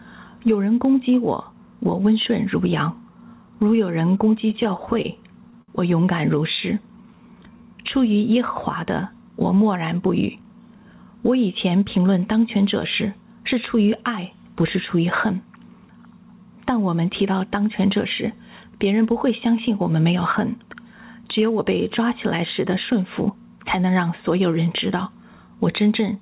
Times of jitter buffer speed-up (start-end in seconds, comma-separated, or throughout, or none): 9.55-11.14